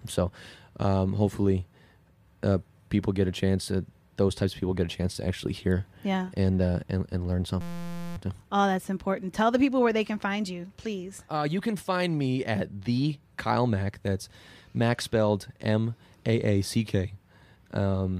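A system hang loop runs from 7.61 to 8.17 s. The playback system stalled while the sound hardware kept replaying one 5.8 ms slice of speech, which fits a 256-sample buffer. Repeated that fast, it becomes a steady 172 Hz buzz.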